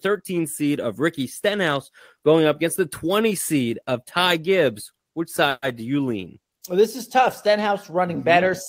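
A speech clip with a call audio freeze from 5.49 to 5.64 s: the last sound is stretched into a fading buzz for about 130 ms, then about 30 ms of silence, before speech resumes exactly where it stopped. The likely cause is delayed packets draining the jitter buffer. Unlike a packet-loss dropout, nothing is cut out. The gap is inserted, so everything after it arrives about 130 ms later.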